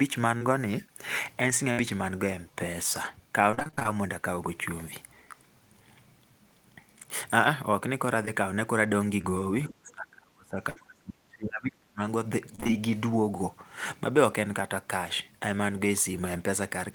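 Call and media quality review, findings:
Short concealed packet loss at 0.37–0.44 s, 8.25–8.28 s and 9.21–9.30 s. Brief smears where 40, 20 and 20 ms went missing. Jitter buffer concealment extended the previous sound.

Burst of packet loss at 1.72–1.79 s and 10.70–10.78 s. About 60 ms lost each time. Decoder held, then faded the last sound. Audio resumes with that stretch gone.

Repeated packet loss (robotic sound) at 3.51–3.94 s, nine gaps up to 30 ms, nearly half concealed. Also at 12.56–12.74 s, four gaps. Choppy texture from back-to-back concealment.

Speech suppressed in double talk, 9.7–12.0 s. Talker level dips and cuts out in pieces, for about two seconds in all. Deepest drop is about 35 dB. Likely echo canceller attenuating near-end speech during overlap.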